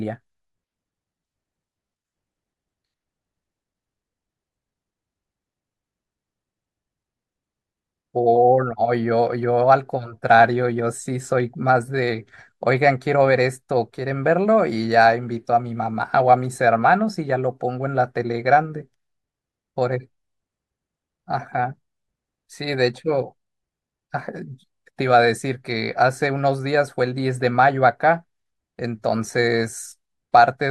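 No technical faults are audible anywhere in the recording.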